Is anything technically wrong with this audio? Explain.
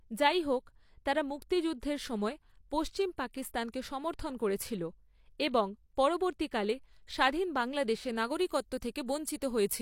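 Yes. Sample clock jitter runs through the whole clip. The converter's clock wanders by very roughly a microsecond or two, so each sample is taken a touch early or late. The resulting error scales with how steeply the waveform is changing, here sitting around 40 dB below the signal. It comes through as a grainy hiss riding on the louder and brighter parts of the speech, and it disappears in the pauses.

From 8.10 s to the end, just after "স্বাধীন বাংলাদেশে", pre-emphasis is left on. A treble boost of the CD 50/15 µs type was applied and the matching de-emphasis never followed, so high frequencies stay lifted, by about 8 dB at 10 kHz relative to 1 kHz. That closing stretch sounds thin and bright, with sibilants pushed forward.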